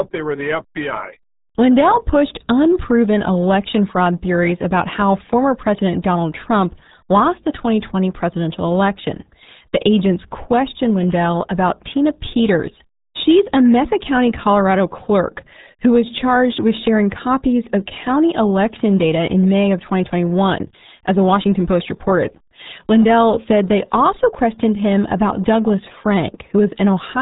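From start to finish the speech sounds muffled and gargly, with a watery, bubbling texture on every syllable and nothing above about 3.8 kHz, so sibilants and consonant edges are dulled. This is the RealAudio 14.4 codec, the early RealAudio 1 speech coder built for dial-up modems. It keeps only a coarse model of the voice and throws away the top of the spectrum, and the heavy damage here fits its 8 kbit/s rate.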